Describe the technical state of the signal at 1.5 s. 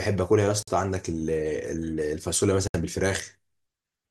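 At 1.5 s the speech signal is intact, with no dropout, distortion, glitch or other technical fault audible at that moment.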